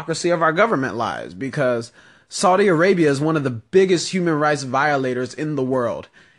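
No technical faults can be heard in the speech. There are no events in it that would need a timestamp.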